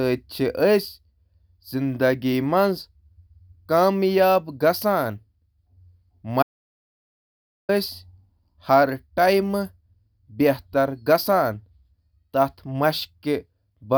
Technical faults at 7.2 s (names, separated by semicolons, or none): audio dropout to silence